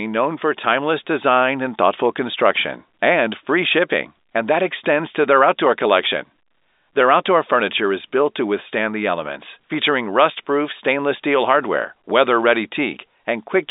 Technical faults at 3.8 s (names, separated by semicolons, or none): none